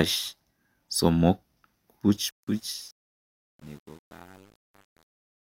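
From 2.17 s to the end at 5.43 s, the speech fades out gradually, and there's truncation distortion on the fade. The level stage seems to keep only about 9 bits with no dither. From 2.55 s on, the quiet tail turns gritty.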